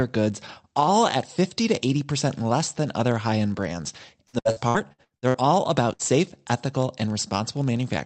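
Running under the whole clip is a buzz at about 46.9 Hz from a block size mismatch (padded). One stage hands over blocks a little shorter than the 1,024-sample blocks the next stage reads, and the shortfall is zero-filled. That rate fits a 1,024-sample block at 48 kHz. Speed drops only to 0.999x, so pitch and timing sound normal.

Right after "other high end brands", from 4.27 to 5.37 s, repeated packet loss makes the audio choppy and robotic. Eight separate holes, the longest 66 ms, are patched by stretching the previous sound, so roughly 43 percent of that stretch is concealment and around 480 ms of real audio is missing.

At 5.94 s comes a short burst of packet loss lasting about 80 ms. Around 60 ms of audio never arrived, and the receiver held the last sound and faded it out for roughly 50 ms before jumping ahead, so that piece is lost.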